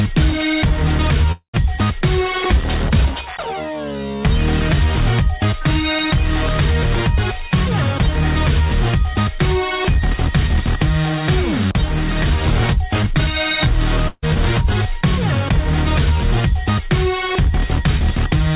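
From 1.32 to 1.55 s the sound stops progressing: the last moment is stretched into a buzzy, hissing tail that fades over a couple of tenths of a second, then near-silence, before the audio picks up again about 0.22 s further along. This is likely a long network dropout, with the receiver concealing the gap and then giving up. On a spectrogram the harmonics smear flat and dim to a blank patch. The waveform shows a decaying repetitive stretch ending in about 0.1 s of flat line.

At 14.07 to 14.24 s a burst of packet loss cuts a shorter hole. The final fragment is held as a fading buzz or hiss for about 150 ms, with roughly 40 ms of near-silence, and the sound resumes about 160 ms ahead. A spectrogram shows a brief horizontal smear that thins out, then a small gap. In the waveform the envelope shrinks smoothly before a clean restart.

Throughout, the call path leaves nothing above 4 kHz, which fits narrowband G.711 A-law at 64 kbps.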